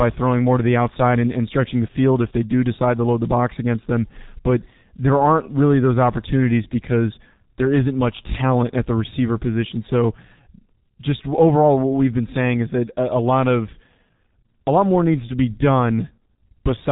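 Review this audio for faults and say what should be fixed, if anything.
The G.723.1 codec damages the whole speech clip. Nothing above 3.8 kHz, heavy muffling and hoarseness, consistent with its 6.3 kbit/s mode. Use a wideband codec at higher bitrate.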